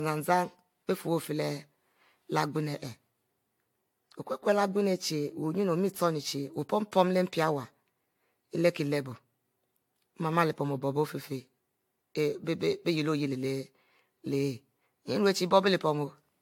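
Throughout, generation loss leaves the speech hollow and swirly with blurred attacks, likely from about five AAC passes; spectrogram shows scattered holes, nothing above 18.7 kHz.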